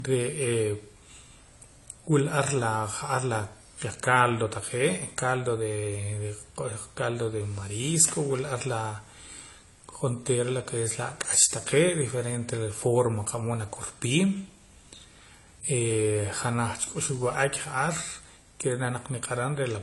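Speech, and the whole clip was likely encoded at a low bitrate first and then saved again at a high bitrate. The later high-rate pass cannot restore what the earlier encoding discarded. Nothing is present above 11.4 kHz for the entire clip, which leaves the speech dull and without air. That cut-off and the artefacts of the earlier encoding both remain, pointing to a low-rate AAC source at around 32 kbit/s re-encoded as MP3 at 256 kbit/s.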